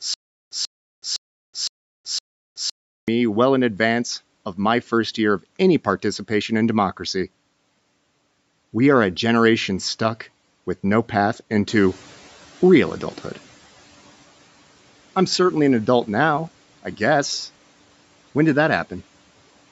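From the very start until 3.08 s, a stutter with silent gaps is already under way. A 139 ms burst repeats five times, each followed by about 373 ms of dead silence, so it recurs every 512 ms, and the audio that should have filled that stretch never plays. The likely cause is a stalled stream that replays its last fragment on each retry. On the waveform these look like identical blocks separated by flat lines, and on the spectrogram like evenly spaced identical columns with pure black between them. Normal playback resumes with "well in advance of".

Just after "stuck with no path", the room's background noise jumps by about 11 dB around 11.5 s. The noise suppressor catches up over 11.69 to 13.63 s. Its noise estimate lags, so the new noise first comes through with less reduction and then sinks by about 10 dB over roughly 1.94 s as the estimate adapts. On a spectrogram the noise floor brightens abruptly and then fades back, still capped at 8 kHz by the call processing. 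On the waveform the baseline thickens and then tapers.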